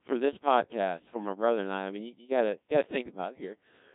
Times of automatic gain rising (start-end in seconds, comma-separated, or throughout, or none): none